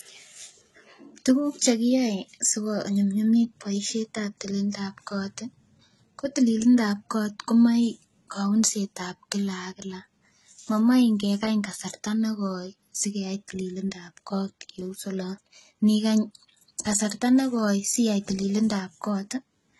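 From start to finish the speech carries heavy codec damage consistent with HE-AAC compression at a very low rate, likely around 16 kbps. Nothing is present above about 11.8 kHz, and the upper band that remains sounds synthesized rather than captured: the coder transmits only the lower spectrum and regenerates the treble by copying lower bands upward under a coarse envelope. Because those copied harmonics no longer align with the originals, sibilants come across gritty, metallic and lispy.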